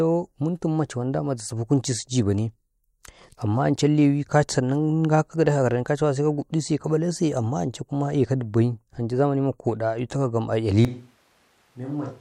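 At 10.85 s the speech turns roomy and hollow, thinner in the bass and about 10 dB quieter, with more background noise, until the end. This is likely a switch to a distant microphone.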